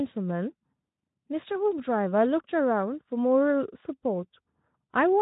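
Speech, with no technical faults to report.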